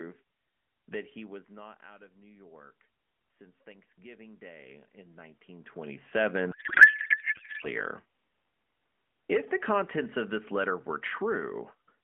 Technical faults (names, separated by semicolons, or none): automatic gain rising; codec payload misread